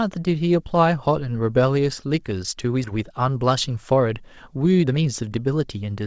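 At 2.84 to 2.86 s comes a skip ahead: about a second of speech was discarded while later audio was already queued, so playback leaps forward and the two sides are spliced with no gap. Unlike a dropout, there is no silence or concealment filling the hole, just an abrupt jump.

From 2.96 to 6.01 s a jitter buffer speed-up follows, as the receiver trims the excess delay by cutting out short pitch-period slices repeatedly. Speech runs at about 114% speed, shedding about 0.4 s overall, and sounds hurried. Unlike a resampling speed change, the pitch stays put. Throughout, the G.722 call path at 64 kbps leaves nothing above 8 kHz.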